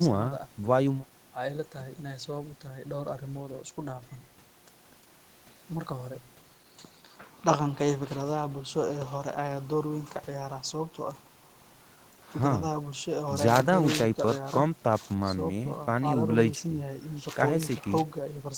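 No technical faults occur anywhere in this speech recording. A room noise sits about 26 dB below the speech, part of the recording space rather than anything the system introduced.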